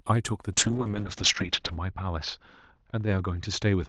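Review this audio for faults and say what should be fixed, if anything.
A call bitrate drop begins at 0.53 s and lasts to the end of the speech. The encoder was pushed to far fewer bits, and the coarser coding sounds rough and watery, worst for about 1.2 s at its lowest point, which fits a fall from roughly 32 kbps to about 7 kbps. On a spectrogram the top edge falls from 12 kHz to 8 kHz, with smeared, blocky texture. Allow the bandwidth estimate a higher minimum bitrate so Opus keeps enough bits.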